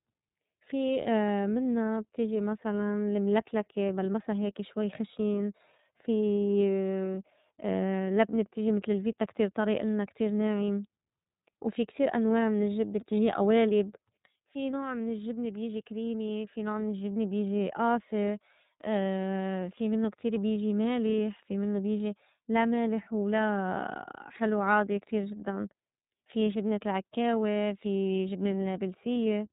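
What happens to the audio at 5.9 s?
At 5.9 s the speech sounds muffled and slightly rough, with a buzzy, synthetic edge and no brightness above about 3.8 kHz. This is iLBC codec damage, and it runs through the whole clip rather than just this moment. iLBC is a narrowband coder that rebuilds each frame's excitation independently, and the coarseness here fits 30 ms frames at roughly 13.3 kbps. Everything above the 3.8 kHz cut-off is simply removed.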